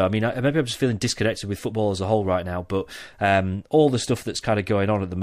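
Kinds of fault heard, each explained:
No faults detected on listening.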